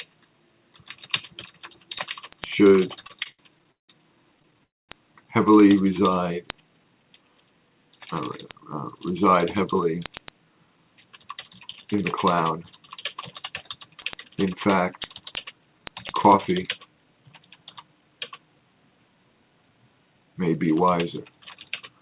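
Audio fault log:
0.18 to 22.01 s, word clock ticks. Single sharp ticks of uneven strength repeat about ten times a second. The receiving clock runs around 200 parts per million off the sender's. Each time the clocks slide past each other, one sample is dropped or repeated, and a tick results.
3.02 to 3.91 s and 4.37 to 4.62 s, repeated stalls (stutter). The first run has 9 gaps filling 344 ms, the longest 169 ms. The second has 7 gaps filling 72 ms, none over 14 ms. The jitter buffer kept running empty. The last sound was stretched over each gap. Nothing is lost, but the audio drags.
4.64 to 4.91 s, call audio freeze. The sound stops for 240 ms of silence within a 250 ms fill, then resumes where it left off. Nothing is missing. Packets were likely held up on the way, emptying the jitter buffer and adding 250 ms of delay.
6.84 to 8.00 s, 8.49 to 8.97 s, 15.20 to 17.01 s and 19.34 to 20.44 s, jitter buffer speed-up. 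The audio runs at 111%, 106%, 107% and 111% speed with unchanged pitch, and sounds hurried. The buffer held too much audio. Short pitch-period pieces were cut out, roughly 150, 40, 150 and 150 ms in total. The call path's 4 kHz band limit is audible throughout.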